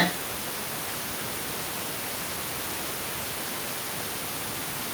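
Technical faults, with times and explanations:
0.0–0.1 s, echo leak: a very faint, brief copy of the speech slips in right at the start, far quieter than the talker and arriving about 0.87 s after the sound it repeats, so it reads as a ghostly trailing scrap rather than a clear repeat. This is likely a far end playing the call on a loudspeaker whose echo canceller missed a moment of what its microphone caught, sending that delayed remnant back down the line.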